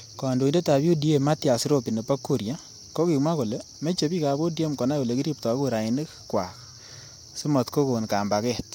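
No technical faults can be heard anywhere in the speech.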